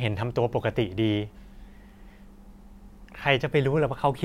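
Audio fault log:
Nothing to log here; the speech comes across without any technical faults to point to.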